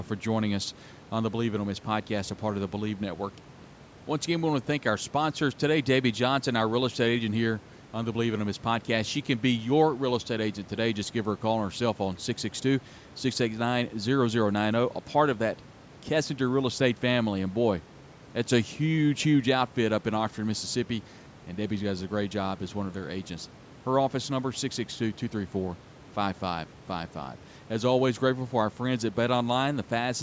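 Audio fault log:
No faults heard in this speech recording.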